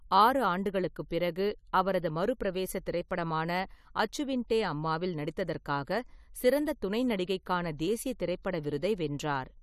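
A transform codec spread its quantisation noise across a whole block, so noise sized for a loud attack also filled the quiet stretch ahead of it. That pre-echo appears from 3.08 to 3.11 s, just after "ஆண்டுகளுக்குப் பிறகு அவரது மறுபிரவேச", where a short hiss runs about 23 ms ahead of a sharp onset in the speech. The attack loses its crispness and sounds softened and smeared rather than starting cleanly.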